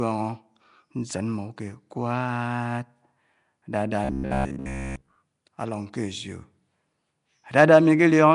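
Throughout, the speech has a hissy, underwater smear and nothing above 10.6 kHz. This is likely Nellymoser compression, whose noise-filled bands give a grainier texture than ordinary low-pass dulling.

From 4.04 to 5.15 s, robotic sound from repeated short buffers turns the speech into a rigid metallic buzz at 66.8 Hz. That fits a roughly 15 ms chunk likely being replayed while most real audio is skipped. Unlike a steady hum, the buzz still loosely follows the speech.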